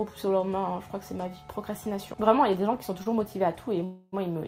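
At 3.03 to 3.08 s the sound briefly hangs, one moment held about 22 ms too long with a faint buzzy dip before it carries on from the same point. This is a short stall from a late packet: the jitter buffer ran dry, the receiver stretched the last sound until the packet arrived, and nothing was lost, though everything afterwards runs 22 ms later. A longer hold follows at 3.84 to 4.14 s, where the audio turns into a fading buzz for about 282 ms, ending in a very brief silence, before resuming exactly where it stopped. This call audio freeze was likely caused by packets held up in transit and an empty jitter buffer. The receiver filled the wait with synthesised sound, so no audio is missing, but about 282 ms of delay is added.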